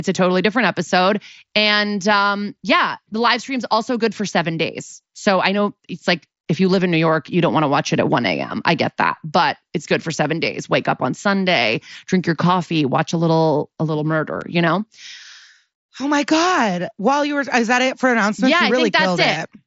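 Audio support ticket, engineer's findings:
Unconcealed Bluetooth headset packet loss at 14.41 s, between "a little a little" and "you know". Sharp 7.5 ms gap with abrupt edges. This fits one dropped voice frame on the link between headset and phone. It was replaced by silence or an idle pattern with no concealment. The mSBC wideband path carries the speech up to 8 kHz, with light graininess on loud sounds.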